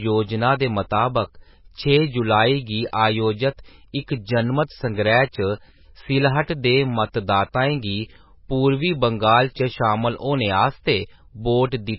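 Throughout, heavy MP3 compression likely dulls the speech: nothing above 5.5 kHz survives, and starved weak frequency lines flicker, giving a watery, swirly texture, which fits roughly 17 kbps.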